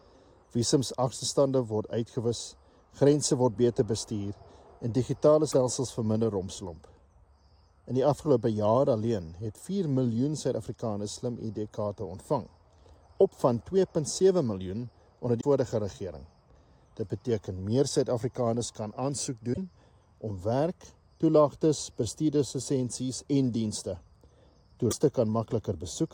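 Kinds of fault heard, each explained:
Broken MP3 bit reservoir: Four short glitches, at 5.51, 15.40, 19.53 and 24.90 s, each 28 to 52 ms long, where the audio skips ahead and briefly goes wrong. That span fits one or two 24 ms frames. The likely cause is missing MP3 frames: the next frame looks back for data it stored in an earlier frame's space, finds bytes from the wrong frame, and decodes garbage until the stream catches up.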